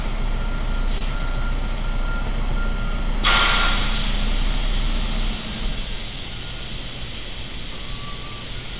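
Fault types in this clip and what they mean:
Short stall from a late packet: Around 0.98 to 1.04 s a packet missed its slot and the jitter buffer ran dry, so the receiver held the last sound for about 28 ms before carrying on from exactly where it left off. Nothing is lost, only stretched, and the playback now runs about 28 ms later. That separates it from a packet-loss dropout, where audio vanishes or is concealed and the timeline stays put.
CD scratch ticks: From about 1.78 to 3.72 s there are nine brief ticks, none longer than roughly 5 ms, spaced at around four to five per second as a blemish comes round once per disc revolution and defeats the error correction, leaving interpolated or muted samples. The steady rotational spacing marks it apart from random clicks or network glitches, which have no fixed rhythm, and the ticks sit on a narrowband path with nothing above 4 kHz.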